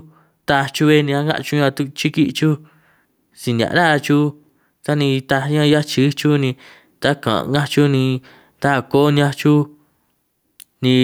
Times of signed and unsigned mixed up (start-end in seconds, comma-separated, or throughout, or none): none